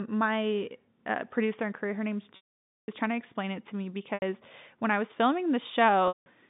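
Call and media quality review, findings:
Packet loss with pitch repetition, three drops. 2.36–2.88 s, after "her name's": 520 ms gone. Buzzy held pitch fades out, then cross-fades back at "was trying to explain". 4.14 s, after "explain it to me": 80 ms, short buzzy hold before "when I was". 6.08–6.26 s: 180 ms, hold then fade. Receiver-side concealment is looping the last pitch period, and the gap lengths fit 20 ms packets. G.711 path is fine, with the line band at 150 Hz–3.7 kHz.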